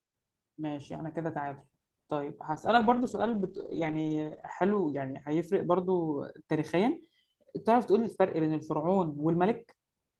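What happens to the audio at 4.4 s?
At 4.4 s the sound sits inside a call bitrate drop from 2.52 to 5.83 s: the encoder fell from 32 to 11 kbps and narrowed the band from 20 kHz to 8 kHz, so the sound turns muffled and watery. Unlike a plain low-pass filter, it also carries coarse coding roughness, and it recovers once the bitrate climbs back.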